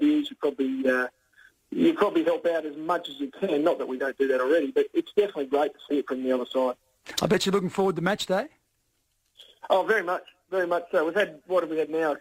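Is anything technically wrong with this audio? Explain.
No, there are no technical faults.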